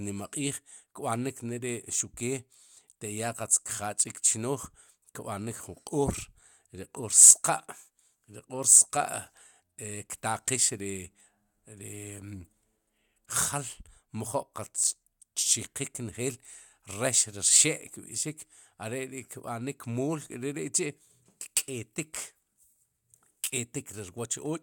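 Nothing technical goes wrong anywhere in this bit of speech, so there's nothing here to point out.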